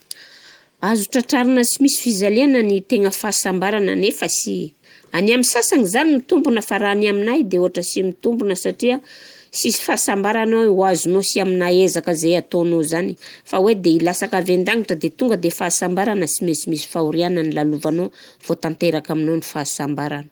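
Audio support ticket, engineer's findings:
No audible faults found in the speech clip; nothing to attribute to any component, ticket can be closed.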